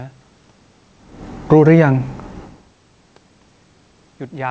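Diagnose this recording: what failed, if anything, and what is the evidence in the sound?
Automatic gain rising in the call processing: between 1.64 and 2.16 s the speech and background swell together by about 5 dB as the gain control compensates for input that fell about 24 dB.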